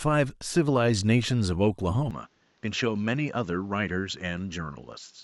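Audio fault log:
2.11–5.23 s, input switched to a poorer device: with no gap, the speech loses everything above 7.6 kHz, drops about 5 dB and gains a faint new noise floor. The simultaneous shift in level and noise points to a likely change of microphone, not mere filtering.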